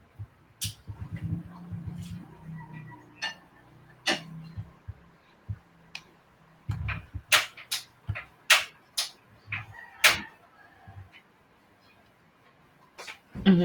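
From 4.51 s to 8.09 s the speech goes through a call bitrate drop. The call's bandwidth estimate fell, so the Opus encoder was given far fewer bits and had to code each frame more coarsely, holding that reduced rate for about 3.5 s before recovering. The voice turns rougher and watery, with more audible coding noise than in the surrounding call audio. The degradation fits a fall from around 32 kbps to around 17 kbps.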